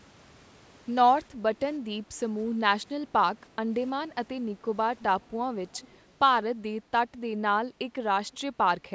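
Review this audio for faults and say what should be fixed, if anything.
A faint, delayed copy of the speech trails in at 5.68–6.12 s and briefly at 8.32–8.37 s, lagging 319 ms and sitting roughly 30 and 35 dB below the direct sound respectively. This echo leak likely comes from a loudspeaker-side echo canceller letting residual pickup return. Using headphones on the far end, or improving that device's echo cancellation, would prevent it.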